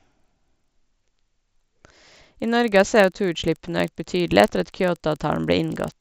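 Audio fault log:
throughout: resampler restarted on every block. Converting 16 kHz to 48 kHz in separate 40 ms blocks leaves each block edge without its true neighbouring samples, so a small error recurs at 25 Hz, heard as a steady tick-buzz riding on the speech and gone in silences.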